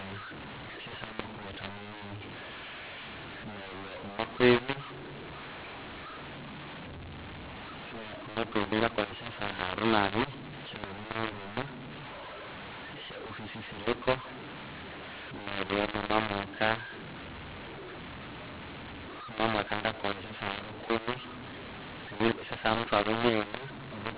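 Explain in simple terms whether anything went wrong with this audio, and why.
Something did go wrong, from start to finish: a mu-law and A-law mix-up. The telephone audio was packed using mu-law but unpacked as A-law, so loudness levels get scrambled. The speech sounds harsh and gritty, and even the pauses hiss instead of going quiet.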